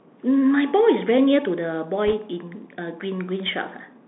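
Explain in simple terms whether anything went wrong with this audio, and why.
The whole recording went through a Bluetooth CVSD headset codec, the narrow phone-style link headsets use for calls. It keeps only sound between roughly 200 Hz and 3.6 kHz, so the speech sounds thin and muffled, with scratchy s sounds and a grainy hiss underneath.

From 2.07 to 2.14 s there are bit errors on a Bluetooth voice link. A couple of percent of the data bits were flipped, heard as a brief rushing crackle rather than sharp clicks, because each damaged bit only nudges the signal slightly.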